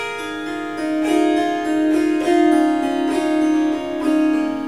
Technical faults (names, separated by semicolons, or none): none